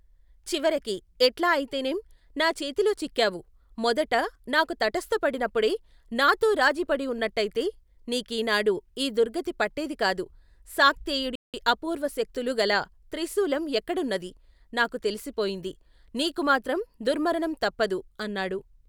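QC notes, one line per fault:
11.35–11.54 s, playback stall: the speech cuts to silence in mid-flow for about 0.18 s, then resumes with "అప్పూర్వశక్తులు గల త్రిశూలం ఎక్కడున్నదీ". The likely cause is the player's buffer running dry or its output thread being blocked briefly, leaving the device with nothing to play until data arrived again.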